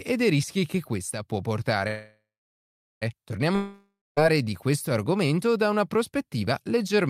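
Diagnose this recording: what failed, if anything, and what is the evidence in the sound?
At 1.87 s the speech stalls until 3.04 s. It's a call audio freeze, likely packets held up in the network so the jitter buffer ran dry. The last sound smears into a fading buzz, then about 0.76 s of silence. The speech resumes where it stopped, with nothing lost and everything after it 1.14 s late.

From 3.56 to 4.19 s there's a long network dropout, likely packets lost outright in transit. You get the same fading buzz filling the gap, then about 0.21 s of silence. When the speech returns it has jumped ahead, skipping roughly 0.62 s that never got played.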